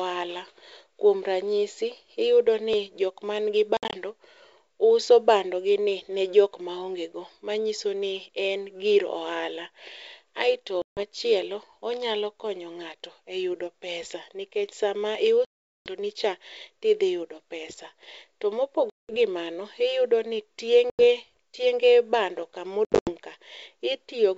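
A speech recording carried over a wideband call, where the audio capture fell behind once and the network lost packets six times. At 2.73 s the program likely failed to read a capture buffer before the hardware overwrote it, so roughly 10 ms of audio vanished and the two sides were spliced together. The result is a small forward jump in the sound and no gap of silence. The call path also dropped packets, leaving hard-edged silent holes in the ADPCM stream. Afterwards the decoder's predictor and step size no longer match the sender's, so each hole is followed by slight distortion that settles within tens of milliseconds. The losses fall at 3.77–3.95 s (110 ms lost in bursts over 160 ms, longest 60 ms), 10.82–11.01 s (150 ms), 15.45–15.94 s (410 ms, right after "pesa nikech sama"), 18.90–19.17 s (190 ms, just before "gi mano iyudo ni"), 20.90–21.06 s (90 ms, right after "gi mano iyudo ni") and 22.85–23.11 s (180 ms scattered over 220 ms, longest 80 ms). 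Between holes the G.722 wideband coding keeps speech clear up to about 7 kHz, with at most a faint upper-band hiss, consistent with full-rate operation.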